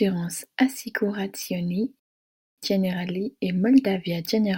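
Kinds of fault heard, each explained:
Sample clock jitter: The converter clock wanders, so each sample is taken slightly off time, on the order of a couple of microseconds. The error tracks the waveform's slope, adding a fine hiss and roughness to the speech, roughly 35 dB below it, strongest on loud, bright passages and absent in pauses.
Rebuffering stall: Playback ran dry and halted until more data arrived. The speech cuts to silence at 1.99 s and picks up again at 2.58 s exactly where it left off, so no material is lost but about 0.58 s is added.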